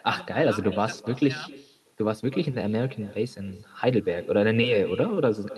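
Throughout the speech there is echo with no canceller: the far end's loudspeaker feeds its microphone, and the returning copy arrives roughly a third of a second later, about 19 dB down and thinner. On a spectrogram, each syllable carries a faint, delayed duplicate trailing behind it.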